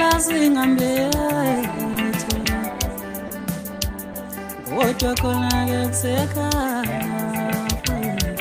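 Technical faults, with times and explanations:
1.93–1.95 s, 2.44 s, 3.27–3.30 s, 4.13 s: sound dropped by the voice detector. The sender's detector likely judged the sound to be background and briefly stopped transmitting, so the receiver filled gaps of 20, 10, 30 and 10 ms with comfort noise before the sound resumed.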